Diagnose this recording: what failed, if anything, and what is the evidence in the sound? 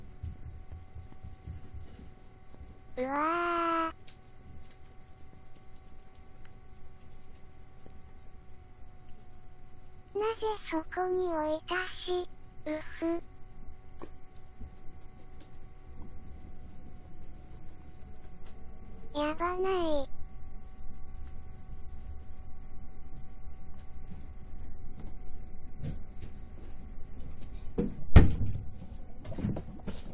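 Nothing in the audio points to a failure at any stage, with no dropouts, discontinuities or added noise to be heard.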